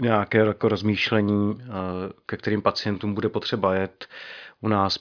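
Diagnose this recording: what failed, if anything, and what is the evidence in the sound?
Nothing failed: no stage from capture through playback leaves an audible fault anywhere in this speech recording.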